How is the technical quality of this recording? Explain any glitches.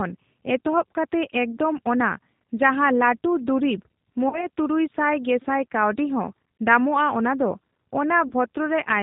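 The speech is clear to follow but carries a plainly rough, slightly synthetic edge with no top end, and there are two short dropouts where the voice is smeared out.

The dull, grainy timbre comes from the G.729 codec (the G.729A variant), which fits an 8 kbit/s voice link. It rebuilds the voice from a vocal-tract filter, a pitch predictor and a few pulses per frame, and it discards everything above 4 kHz, which leaves the speech muffled and artificial.

From 4.29 to 4.47 s, just before "ᱥᱟᱭ ᱜᱮᱥᱟᱭ ᱠᱟᱣᱰᱤ ᱦᱚᱸ", the voice smears out and fades. A second, briefer episode follows from 8.28 to 8.32 s. Both are VoIP packet loss concealed by the speech codec. Roughly 40 ms and 30 ms of audio went missing, which points to about four and three lost 10 ms frames. The decoder extended the last pitch and filter at falling gain, and the speech stays weakened briefly as it recovers.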